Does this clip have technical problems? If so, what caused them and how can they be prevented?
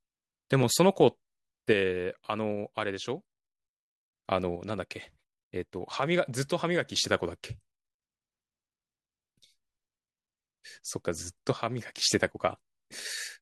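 Yes. The speech drops by about 6 dB from 1.73 to 4.13 s, 4.56 to 6.96 s and 11.53 to 12.02 s, likely one channel dropping out before the mono sum. Check stereo cabling and connectors, and monitor both channels while recording.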